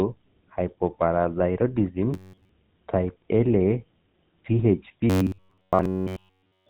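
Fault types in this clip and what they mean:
GSM full-rate codec: Buzzy, gravelly roughness throughout with nothing above about 4 kHz, typical of the 13 kbps full-rate coder's pulse-driven vocal-tract model.
Robotic sound from repeated short buffers: A rigid metallic buzz at 93.8 Hz from 2.14 to 2.49 s and from 5.10 s to the end, likely from repeating roughly 10.7 ms chunks in place of most of the audio.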